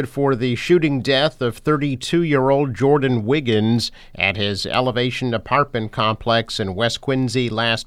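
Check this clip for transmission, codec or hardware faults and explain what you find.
No transmission, codec or hardware fault can be heard in this speech recording, and the signal stays continuous and steady throughout.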